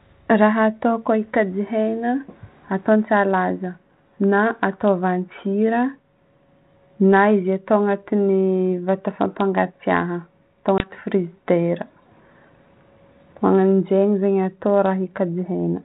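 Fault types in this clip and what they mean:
Packet loss on an ADPCM call: at 10.78 s the speech breaks into a sudden, hard-edged gap of about 20 ms. It is true silence rather than a fade, and the speech comes back with some roughness that clears by 10.91 s. That fits one lost packet replaced by silence. The G.726 decoder, at 32 kbit/s, then works from prediction and step-size state that no longer match the sender's until they realign.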